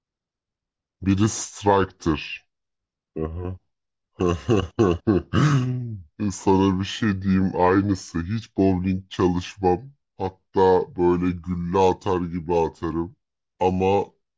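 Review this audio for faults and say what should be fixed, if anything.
Wrong sample rate throughout: the samples are clocked out more slowly than they were captured, with no resampling, which fits 22 kHz material played at 16 kHz. The speech runs at 0.726 times normal speed and sits 5.55 semitones low, sounding slow and deep.

To prevent it, make sure the playback rate matches the rate the audio was recorded at, or resample to the device rate before output.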